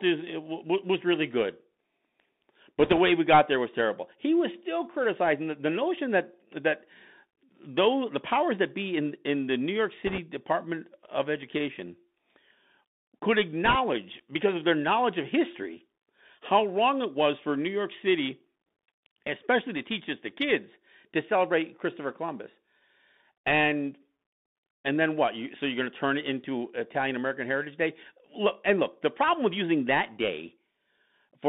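The whole clip passes through a Bluetooth CVSD headset codec. It encodes each sample as a single up-or-down bit with an adapting step, at a rate that points to a 64 kbps link. The speech sits between about 200 Hz and 3.7 kHz, with scratchy s sounds, slurred loud peaks and a fine granular hiss underneath.

Three bursts of bit errors on the Bluetooth voice link follow. The first runs from 2.80 to 2.98 s, just before "way we got there". The second runs from 10.07 to 10.18 s. The third runs from 13.65 to 13.75 s, just before "because of their knowledge". The error rate is a few percent, slightly higher in the later two. Since each flipped bit only nudges the waveform and the effect fades, these sound like brief rushing crackle rather than sharp clicks.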